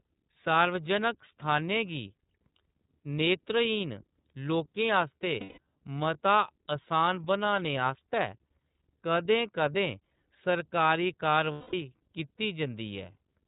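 The whole clip runs through the iLBC codec, which caps the speech below 4 kHz and gives it a slightly rough, synthetic edge, consistent with its 30 ms frame mode. Unlike a predictive codec, damage stays confined to single frames instead of smearing forward.

At 5.40 s and again at 11.52 s come lost iLBC frames, lasting 180 ms and 210 ms. Each gap fills with a held, buzzy vowel-like tone built from the last pitch cycle plus noise, rather than silence or clicks, and speech recovers cleanly immediately afterwards.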